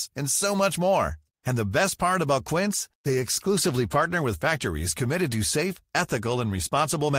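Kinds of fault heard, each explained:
Call bitrate drop: From 2.87 s to 4.21 s the call's bandwidth estimate falls, and the encoder is pushed from 32 kbps down to 18 kbps, holding the lowest rate for about 1.28 s. With fewer bits the speech is coded more coarsely, so it turns rougher and loses detail for that stretch. Quality recovers as the bitrate climbs back, just before "with factories committed to".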